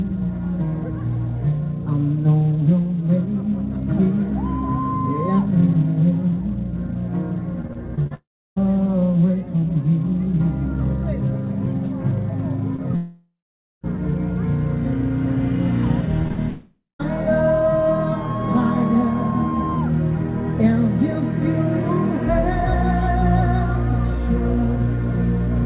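Narrowband audio with nothing above 4 kHz, consistent with a G.711 A-law call at 64 kbps, turns choppy and robotic from 7.62 to 8.12 s and again from 16.22 to 17.04 s. This is repeated packet loss, with short holes up to about 35–39 ms patched by continuing the previous sound. Fading buzz collapsing into silence at 8.14–8.58 s, 12.96–13.85 s and 16.50–17.01 s marks a likely long network dropout, with the missing audio never returning. A brief smear at 12.76–12.80 s is short concealed packet loss filling a 20 ms hole.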